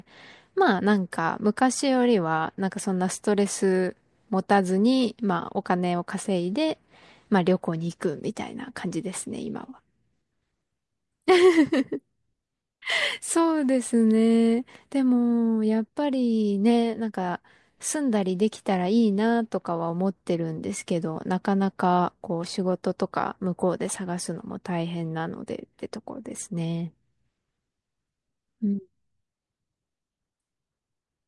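A recording of speech, with no technical faults to point to. Nothing in it calls for a time or a cause to be noted.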